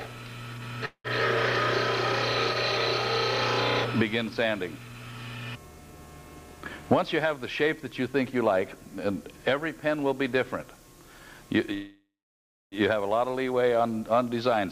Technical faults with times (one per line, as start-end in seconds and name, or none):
0.85-1.07 call audio freeze
7.02-8.76 jitter buffer speed-up
11.74-12.75 call audio freeze